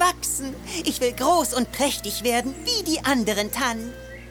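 From start to finish there's mains hum, a steady 60 Hz drone sitting roughly 20 dB under the sound, from a ground loop or nearby transformer leaking power-line current in.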